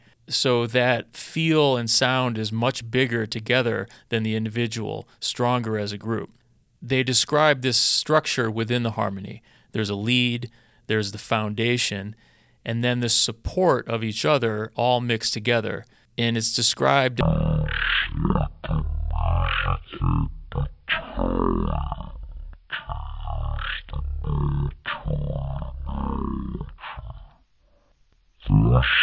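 From 17.21 s, right after "it's described", to the end at 29.02 s, the speech shows a wrong sample rate fault. It drops to one third of its speed and about 19 semitones lower in pitch, turning slow and deep. This fits 48 kHz audio played at 16 kHz without conversion. On a spectrogram, harmonics and formants squeeze down to a third of their frequencies and syllables stretch threefold. The waveform's cycles widen accordingly.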